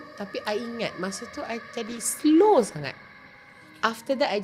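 At 1.9 s the call's bandwidth estimate collapses and the encoder is pushed down to far fewer bits, a call bitrate drop that sounds consistent with a fall from around 96 kbps to about 21 kbps. For roughly 1.7 s the audio is coded much more coarsely: the top end is cut away, leaving the sound muffled, with a rough, watery texture. It recovers by 3.67 s, when the bitrate climbs back and the detail returns.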